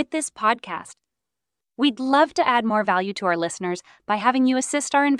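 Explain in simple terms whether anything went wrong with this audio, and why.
Nothing went wrong here: the speech has no audible dropouts, glitches, distortion or level problems anywhere in the recording.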